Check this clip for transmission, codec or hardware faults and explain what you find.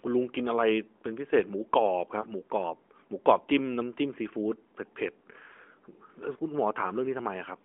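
One transmission fault stands out in this narrowband mobile speech, heard through the AMR-NB codec's 250 to 3400 Hz telephone band with its light codec texture.

From 2.22 to 2.27 s there is a brief dip or warble, typical of a lost AMR speech frame. The gap fits a single 20 ms frame failing its checksum. The decoder fills it by reusing the last good pitch and vocal tract settings at reduced gain.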